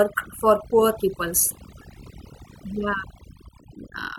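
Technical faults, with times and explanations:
Throughout: overdone noise removal. The noise reduction was set too aggressively for this speech, so any frequency band sitting close to its noise estimate is pulled far down or shut off, taking the quieter parts of the voice with it. Between phrases the background drops to near silence dotted with twinkling specks. A spectrogram shows scattered isolated dots in the gaps and ragged, hollowed-out harmonics, while the waveform's pauses sit almost flat.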